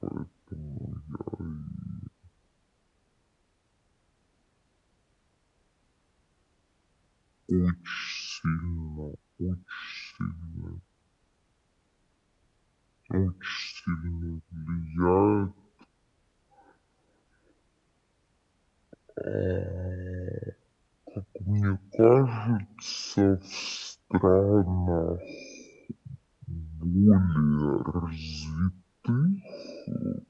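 From start to end the speech runs at half speed and a full octave low, the signature of a wrong sample rate. The samples were played without conversion at half their intended rate, which fits 48 kHz audio played at 24 kHz, so voices sound deep, slow and drawn out.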